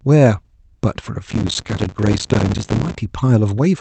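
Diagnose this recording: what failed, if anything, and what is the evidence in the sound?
Driver or buffer stage: processor overload crackle from 1.30 to 2.95 s. Dense gritty tearing comes from many missed deadlines, each leaving a silent gap about 5 ms long. It is continuous, unlike isolated packet glitches.

Network jitter buffer: a short stall from a late packet at 1.63 to 1.68 s. The speech is held about 17 ms, then resumes where it stopped. Nothing is lost, unlike a dropout.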